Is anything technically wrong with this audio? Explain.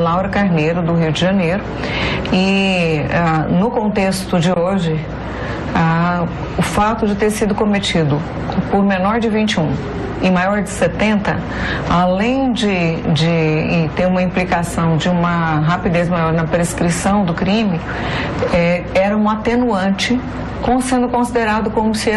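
Yes, there is one fault: compressed frames skipped, at 16.15 s. Part of the compressed stream never reached the output, either missing from the file or rejected by the decoder as damaged, so playback jumped straight past it. Roughly 20 ms of audio is lost, and the sound jumps slightly forward in time.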